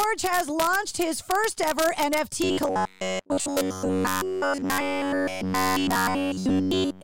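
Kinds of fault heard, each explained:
Integer overflow: a few of the loudest peaks, only a tiny fraction of samples, wrap to the opposite sign instead of limiting, giving sharp cracks far harsher than clipping.
Robotic sound from repeated short buffers: from 2.44 s, right after "launched his first ever", to the end, the speech becomes a rigid metallic buzz at 93.8 Hz, likely from a roughly 10.7 ms buffer looping.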